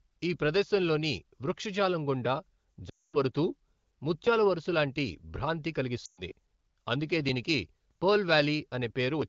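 At 2.89 s, after "ఈ ప్రదేశంలోని వృక్షజాలం గుండా", and again at 6.05 s, after "ముత్యాల వరుస లాంటి భ్రాంతి", lost AMR speech frames occur. About 0.24 s and 0.12 s of wideband speech fail to arrive intact, so the decoder stretches the last pitch and vocal-tract shape with falling gain. The result is a sound that drops to near silence within two frames, then weak, rough recovery, unlike a plain dropout's abrupt silence or a click.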